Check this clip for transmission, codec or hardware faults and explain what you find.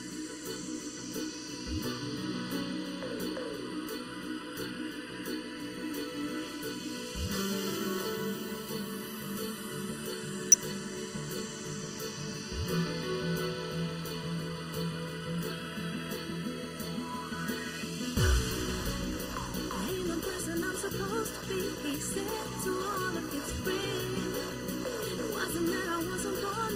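Two faults are present. Throughout, the sound is hollow and phasey, with notches starting near 700 Hz: channel delay (comb filtering), one channel lagging under a millisecond before mono summing. Brief glitches at 10.52–10.54 s and 25.17 s come from damaged data in a compressed stream, where the decoder loses frame sync.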